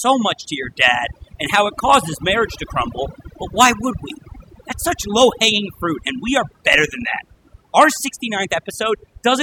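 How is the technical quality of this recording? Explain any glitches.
Technical quality is compromised by overdone noise removal, which runs through the whole speech clip rather than appearing at one moment. A noise reduction stage set far too aggressively has cut individual frequency bands down or out wherever they sat close to its noise estimate, taking quieter speech detail along with the noise. The result is a background of near silence dotted with twinkling specks. On a spectrogram this shows as scattered isolated blips in otherwise empty gaps and a patchy, hollowed-out speech spectrum.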